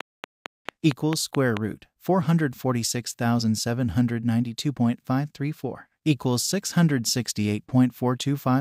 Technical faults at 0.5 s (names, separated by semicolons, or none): train of clicks